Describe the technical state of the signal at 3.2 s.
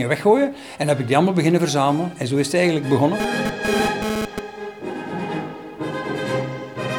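A hard, raspy buzz cuts in at 3.2 s and runs to 4.39 s, sitting at about 217 Hz with a dense stack of harmonics and only about 2 dB below the audio it intrudes on. This is GSM phone buzz: a nearby 2G handset is transmitting in bursts roughly 217 times a second, and the audio circuitry rectifies those radio pulses into sound. Its appearing for just over a second fits a data transfer.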